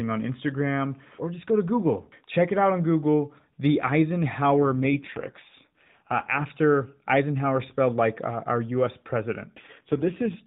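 From 4.57 to 6.48 s and again from 9.56 s to the end, the speech turns rougher and more synthetic with no gap or narrowing of band: an AMR rate drop, the narrowband mobile codec stepping down, which fits a fall from 12.2 to 5.9 kbps.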